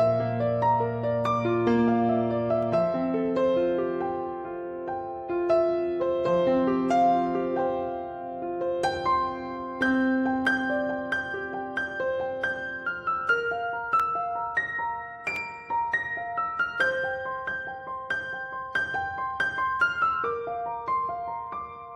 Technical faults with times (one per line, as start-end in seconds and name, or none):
2.63 dropped samples
10.45 dropped samples
14.00 dropped samples
15.36 dropped samples